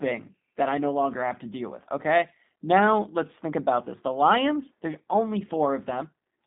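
Speech carrying G.729 codec damage throughout: plainly rough, synthetic sound that fits an 8 kbit/s low-rate model. A spectrogram shows a hard ceiling at 3.7 kHz and an empty floor under 200 Hz, a telephone band with nothing above it.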